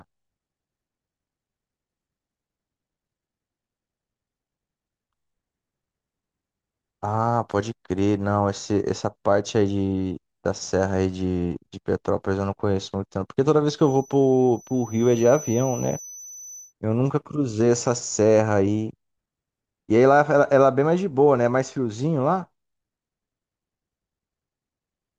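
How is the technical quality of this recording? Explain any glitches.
One glitch is present. From 13.76 to 16.74 s a thin feedback whistle at 6 kHz sits roughly 20 dB under the speech, likely a speaker-to-microphone loop held just below runaway. It rises and fades slowly in level but never swells into a howl.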